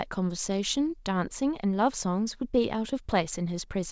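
No technical faults can be heard in this speech.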